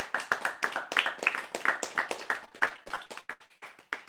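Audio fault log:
2.45–3.64 s repeated packet loss (robotic sound): fourteen gaps, the longest 78 ms, each patched by stretching the previous sound, giving choppy sound with pieces missing.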